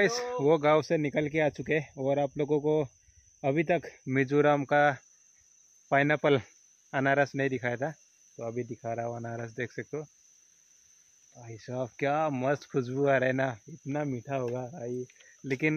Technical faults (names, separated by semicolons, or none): channel delay (comb filtering)